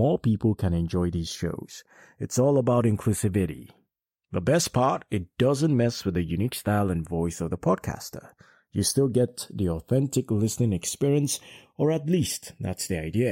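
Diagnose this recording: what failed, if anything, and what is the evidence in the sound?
Channels drifting apart, throughout the speech: a slow flanging sweep runs the whole length of the clip. This points to the converter stage, with the two channels captured by devices on separate clocks, apparently around 50 ppm apart. The offset between them grows steadily, reaching a few tenths of a millisecond by the end. Once the channels are summed to mono, that sliding delay moves the comb-filter notches gradually across the spectrum.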